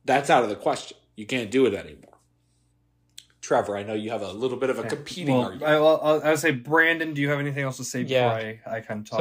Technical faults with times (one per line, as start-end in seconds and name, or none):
none